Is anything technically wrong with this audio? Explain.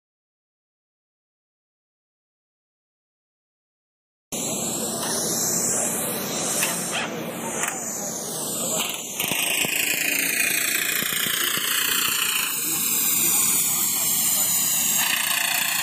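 Yes. Throughout, the channels drift apart: clocks about 150 ppm off push the inter-channel delay toward a millisecond, so mono comb notches sweep as slow flanging rather than staying fixed.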